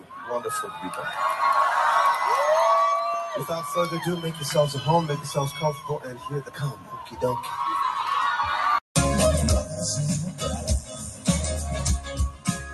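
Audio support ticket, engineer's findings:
Noise suppressor applied to music or sounds, full clip. Level pumps with a swing of around 10 dB. Sustained tones, ambience and reverb tails duck while onsets pass. Probable component: speech-tuned noise suppressor left enabled, misreading steady content as background noise. Fix: bypass suppression for non-speech sources or switch to a music mode. Top end stops near 12 kHz, consistent with the call codec path.

Sound cut by the noise suppressor, four spots: 0.00–0.31 s, drop of about 10 dB; 0.66–1.00 s, about 6 dB; 3.16–3.77 s, about 9 dB; 5.54–7.19 s, about 10 dB, longest. Steady or decaying material sinks and tails end early. Same component: suppressor gain clamping on content classed as noise.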